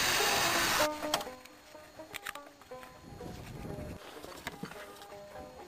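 From 1.11 to 1.45 s there is zipper noise. The level drops by about 15 dB in steps of about 3 dB, around fifteen per second, with no smoothing. Each jump leaves a small click, so a ticking rides on the sound as it falls.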